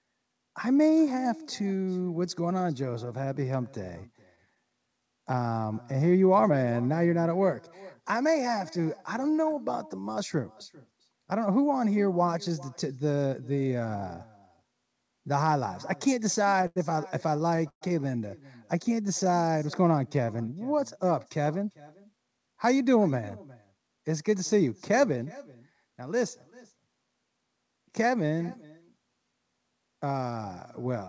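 Channel delay (comb filtering) runs through the whole speech clip. One channel trails the other by a fraction of a millisecond, and the mono sum cuts evenly spaced notches starting around 3 kHz, leaving the voice hollow and phasey.

Echo with no canceller is also present throughout. The far end's loudspeaker feeds back into its microphone, so each phrase returns roughly 0.4 s later as a thin copy at about -23 dB. All of this sits within a band that stops at 8 kHz, which fits a G.722 call path.

Scattered short gaps appear from 3.06 to 4.73 s. About ten tiny packet losses, none longer than roughly 15 ms, were patched by extending the preceding sound, which produces brief ticks and smears.

A jitter buffer slow-down follows from 4.87 to 6.52 s. Repeated pitch periods add 87 ms, so the speech plays at 95% speed without any change in pitch and sounds slightly drawn out.

A jitter buffer speed-up runs from 8.54 to 9.57 s. 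Trimmed pitch periods push the speech to 106% speed at unchanged pitch, and it sounds a little hurried.

Repeated stalls (stutter) occur from 16.42 to 17.83 s. The buffer runs dry six times, the longest gap lasting 123 ms, and 250 ms of filled-in sound makes the speech drag and stutter.

A second jitter buffer slow-down runs from 18.76 to 20.60 s. It adds 184 ms of repeated material, bringing the speech to 90% speed with stretched sounds.

A second jitter buffer speed-up runs from 22.40 to 26.73 s. The speech plays at 107% speed as roughly 0.3 s of pitch periods are removed, and it sounds rushed at the same pitch.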